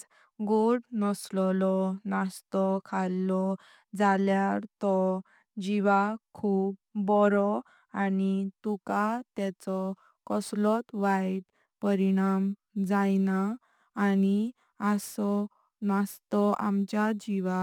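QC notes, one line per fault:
8.50–17.62 s, crude rate conversion: from "बारो आनी", unfiltered nearest-sample picking, fitting a 48 to 44.1 kHz change, adds gritty inharmonic fizz about 30 dB below the speech.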